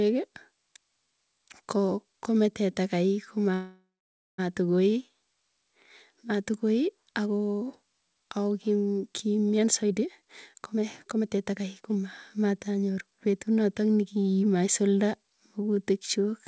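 A speech recording carried over a call path, with nothing heard above 8 kHz, which fits a G.722 wideband codec. At 3.54 s the audio stalls until 4.40 s. The last sound stretches into a fading buzz or hiss, then about 550 ms of silence. Speech resumes where it stopped, so nothing is lost. This is a call audio freeze, likely from delayed packets draining the jitter buffer, and it adds roughly 0.84 s of delay. From 9.61 s to 13.54 s comes a jitter buffer speed-up. Speech runs at about 122% of normal pace while keeping the same pitch. It sounds hurried. The receiver is trimming small pitch-period pieces again and again to shed the built-up delay. Around a second of audio is removed this way.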